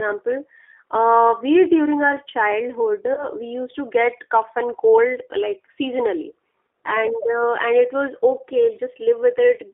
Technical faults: G.729 codec; VoIP packet loss concealed by the speech codec

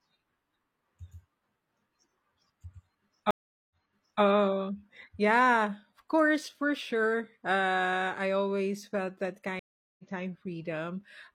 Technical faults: stream reconnect

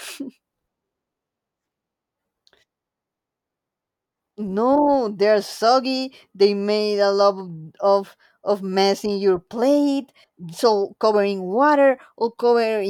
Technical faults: none

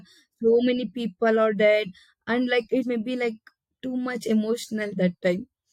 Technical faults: compressed frames skipped

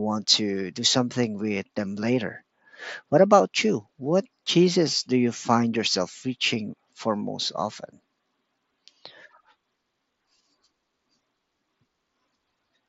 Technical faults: concealed Bluetooth headset packet loss

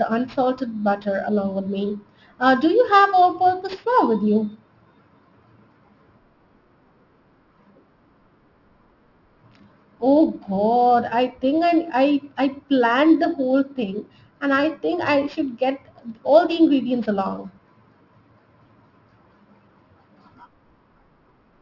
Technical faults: aliasing

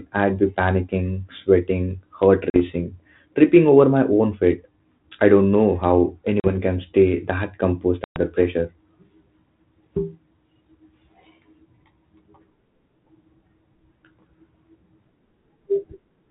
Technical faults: packet loss on an ADPCM call

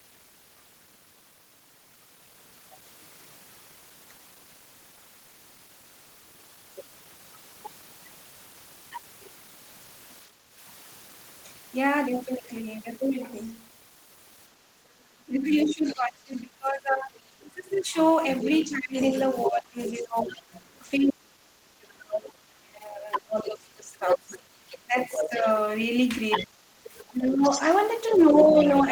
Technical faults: background gated by the echo canceller; speech suppressed in double talk; other side's voice leaking through

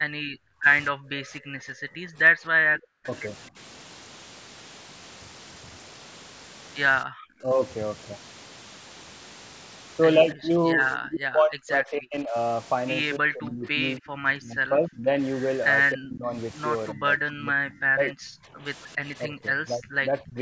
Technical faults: converter idle tones; background gated by the echo canceller; speech suppressed in double talk

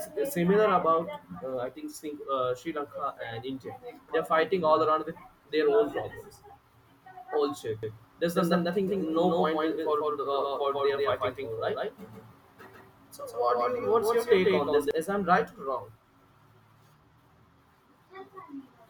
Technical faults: doubled audio track

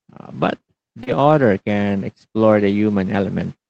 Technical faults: short concealed packet loss; lost packet rebuilt from error correction

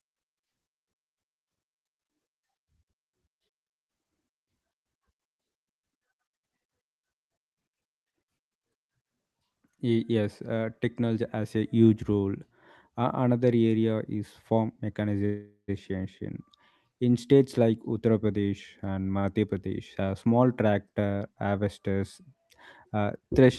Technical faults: call audio freeze; short stall from a late packet

